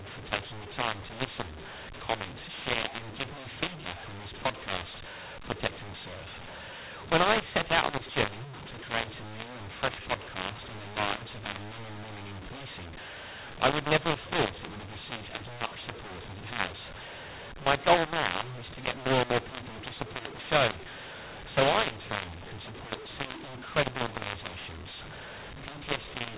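From start to finish, the speech was coded as A-law but decoded as mu-law, a clear case of mu-law and A-law mixed up. Each 8-bit code is expanded along the wrong logarithmic curve, so levels come out scrambled: some samples too loud, others too soft, and the quietest lifted well above silence. The result is harsh, gritty speech, with hiss filling the pauses, all within the 4 kHz band of the 8 kHz telephone coding.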